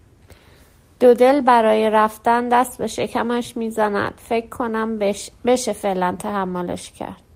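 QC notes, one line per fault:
No dropouts, clicks, level jumps or other transmission faults are audible anywhere in the speech.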